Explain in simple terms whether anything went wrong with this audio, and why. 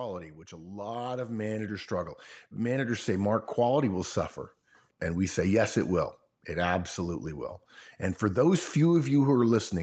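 Yes, one thing went wrong. From 0.49 to 4.23 s the speech grows steadily louder. This is automatic gain rising: the call's level control judged the input too quiet and kept turning it up over several seconds. The background swells right along with the voice, and the change is a smooth climb rather than a sudden jump or a quick pumping up and down. That rules out someone simply moving closer or speaking louder. The sound is also capped at about 8 kHz, as is normal on this kind of call.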